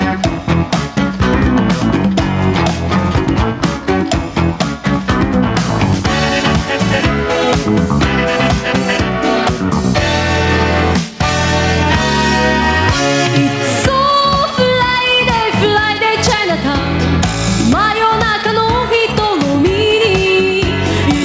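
Gain pumping runs through the whole clip: the level keeps surging and sinking by around 10 dB, leaving loud and soft passages squashed close together. The likely cause is an input gain set far too high, with a fast limiter or compressor clamping down on every peak. On a waveform, the envelope looks flattened against a ceiling. On a spectrogram, the call's microphone processing leaves nothing above 8 kHz.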